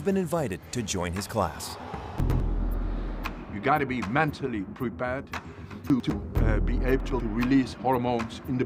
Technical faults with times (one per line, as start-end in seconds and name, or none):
2.20-2.40 chunks out of order
5.90-6.10 chunks out of order
7.00-7.20 chunks out of order